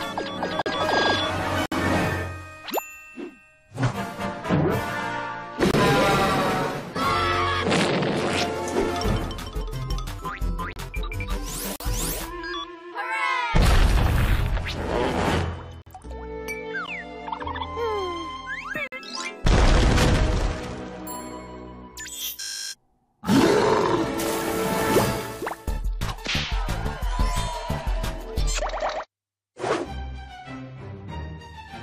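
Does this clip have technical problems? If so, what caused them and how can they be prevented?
Yes. The sound cuts out into brief hard-edged silences at 0.62–0.66, 1.66–1.72, 5.71–5.74, 10.73–10.76, 11.76–11.80, 15.82–15.86, 16.86 and 18.87–18.92 s, each lasting 14 to 59 ms. These are gaps between stream segments: the timestamps of consecutive 1-second segments fail to meet, so the player fills each hole with silence. Nothing is lost, but playback is pushed later. To prevent it, the packager should write segment timestamps that join exactly, with each segment starting where the previous one ends.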